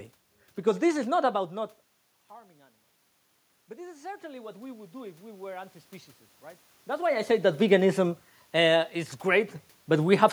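Around 3.67 s the automatic gain rising kicks in. The input level had dropped by about 19 dB, and the gain control responded by pushing its gain up about 7 dB over roughly two seconds, until 5.81 s. You hear the speech and the room noise swell together as one slow ramp, rather than the talker getting louder. That's different from the natural level shifts around 1 s and 6.5 s, where the talker simply moved relative to the mic.

Right after "I say that veganism", at 8.43 s, the level falls by about 6 dB all at once and stays down until 9.56 s before snapping back. That sudden, exact step is what you'd expect if one channel drops out of a stereo pair: whatever both sides shared loses half its contribution in the mono sum, and anything carried only on the missing side vanishes completely. A lost channel is the likely cause.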